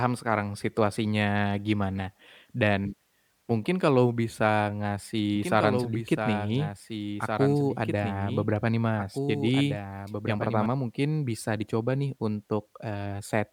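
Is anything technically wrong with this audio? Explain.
Yes. From 5.36 to 10.66 s, ending just before "mungkin bisa dicoba nih", a doubled audio track plays: a copy of the speech about 5 dB quieter trails about two seconds behind, likely from a slower second capture path. It cuts in and out abruptly.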